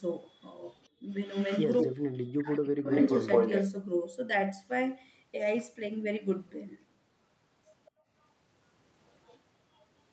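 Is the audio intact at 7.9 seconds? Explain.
No. From 7.85 to 7.91 s a faint, delayed copy of the speech, trailing by about 209 ms and roughly 30 dB below it, slips through. This is likely an echo leak: a far-end loudspeaker's sound reached a microphone and escaped its echo canceller.

Right after, from 7.91 to 8.09 s, the room background dips sharply, by about 33 dB at its deepest, for roughly a fifth of a second. This is background gated by the echo canceller, which clamped the microphone down while the loudspeaker played.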